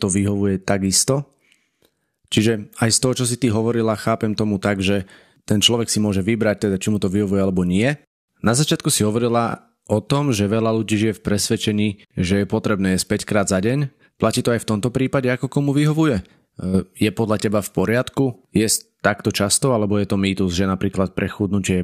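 Speech with channel delay (comb filtering) from the start to 15.29 s: one channel lags the other by roughly a single sample before the mono sum, so cancellation begins only near the top, with the first notch around 20 kHz, leaving the sound dulled at the top.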